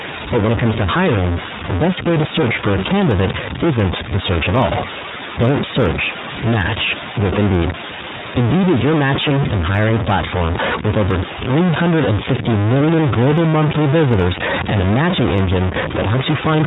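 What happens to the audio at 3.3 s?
At 3.3 s the speech carries a distortion that runs through the whole clip, with noise filling the pauses. The likely cause is a stuck bit, one data bit held fixed, which throws about half the samples off by a constant step. On a waveform this shows as jagged, stepped offsets; a spectrogram shows broadband grit even in gaps.

The same moment also carries iLBC codec coding throughout, audible as a rough, slightly synthetic quality. Each 30 ms frame is coded on its own, which fits a rate near 13.3 kbps, and nothing passes above 3.8 kHz, so a spectrogram shows a hard ceiling with empty space above it.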